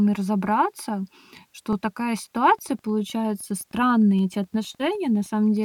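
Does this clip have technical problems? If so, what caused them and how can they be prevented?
Yes. In the repeated buffer fault, new audio reached the playback device late, so it replayed its last block, about 5.33 ms long, which fits a 256-sample buffer. This causes brief clicks in the speech at 0.46 s and 1.73 s, and a slightly longer double repeat at 4.19 s. Larger buffers or better scheduling of the audio thread would prevent this.

The Wi-Fi interference comes from a nearby radio's beacon, sent every 102.4 ms, along with bursts of data traffic. The audio circuit rectifies these signals, producing a faint ticking about ten times a second, roughly 40 dB below the speech, from 2.39 s to the end. Moving the radio away from the audio circuit and shielding its wiring would prevent this.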